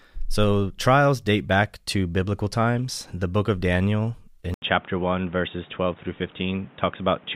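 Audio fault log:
4.54 s to the end, input switched to a poorer device: a gap of 80 ms opens at 4.54 s. After it the speech turns dull and boxy, with nothing above 3.8 kHz. A new background hiss sits about 30 dB below the speech. Loudness stays much the same. The likely cause is the system changing to a narrower-band microphone or a headset's call profile, so the top end vanishes and the new device's own noise and tone take over.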